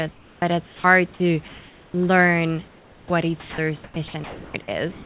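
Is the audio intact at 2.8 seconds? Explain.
No. From 2.68 to 3.1 s there's comfort noise in place of the background: a featureless hiss about 9 dB quieter, likely generated by the receiver while transmission paused.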